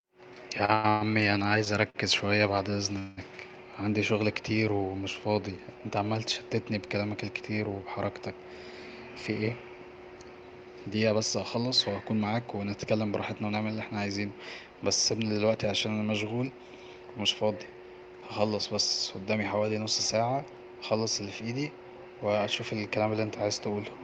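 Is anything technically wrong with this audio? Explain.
Yes, there are two network-playback faults in this speech clip.

From 0.65 to 3.19 s, just before "عندي شغل كتير ومش", there are repeated stalls (stutter). Packets arrived late, and the jitter buffer ran dry six times. Each time the receiver stretched the last sound to cover the gap, the longest gap being 186 ms. About 0.48 s was filled this way, roughly a fifth of the span, and nothing was lost. The speech drags and hitches.

Jitter buffer speed-up occurs twice. The first runs from 10.95 to 13.65 s, ending at "اللي احنا عاوزينه بس", and plays at 106% speed, trimming about a fifth of a second. The second runs from 21.44 to 23.78 s, after "ساعة هخلص اللي في", and plays at 105% speed, trimming about a tenth of a second. In both, the buffer held more audio than its target, so the receiver cut many short pitch-period slices. The speech sounds hurried but keeps its pitch.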